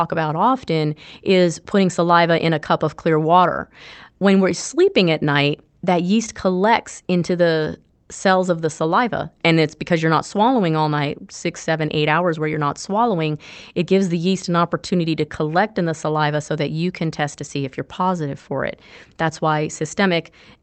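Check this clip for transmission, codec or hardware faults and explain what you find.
Nothing here points to a transmission, codec or hardware problem; the speech came through an ordinary Opus call path with its usual top end near 8 kHz, and there's nothing more to report.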